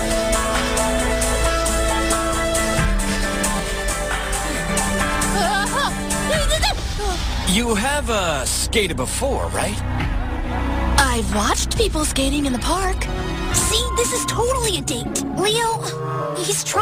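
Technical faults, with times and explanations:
3.60–4.69 s: channel delay (comb filtering). For about a second, one channel lags the other by roughly 20 ms before the two are summed to mono. Content common to both channels reinforces at some frequencies and cancels at others. This produces a regular series of notches that starts near 20 Hz and repeats at even spacing up the spectrum. The sound turns rough and slightly doubled over that span because a lag this long begins to be heard as a second, late copy.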